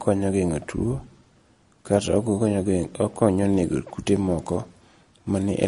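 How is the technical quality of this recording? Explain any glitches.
The quality is poor. Heavy compression runs through the whole recording, and the last part also has a rough, hissy overlay.

MP3 compression is the likely cause of the watery, swirly texture throughout. Nothing is heard above 10.6 kHz. The encoder cut the treble and dropped weak detail frame by frame. The damage is plainly audible, which fits a low bitrate around 40 kbps.

Sample clock jitter appears from 3.44 s to the end. The converter's timing wanders by several microseconds, so samples land slightly off. The error rises where the speech changes fastest. It sounds like a grainy hiss roughly 30 dB below the speech, and it disappears in pauses.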